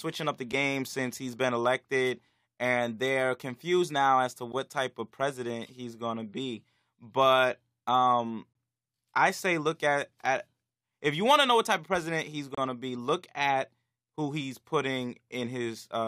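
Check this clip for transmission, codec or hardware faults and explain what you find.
The speech has a gap between stream segments at 0.52 s, 4.52 s, 8.53 to 8.55 s and 12.55 to 12.58 s. The timestamps of adjoining 4-second segments don't meet, so the player fills the space with silence, producing hard-edged holes of roughly 7 to 29 ms that grow longer each time.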